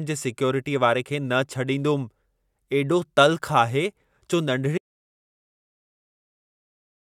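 At 4.78 s the speech stops abruptly and the rest of the clip is dead silence, with no room tone or background hiss. This is an audio dropout to silence that runs to the very end. The abrupt cut to silence most likely means the input signal was lost, through a disconnected device, a failed link or an accidental mute, while recording carried on writing empty samples. Whatever followed in that final stretch is unrecoverable.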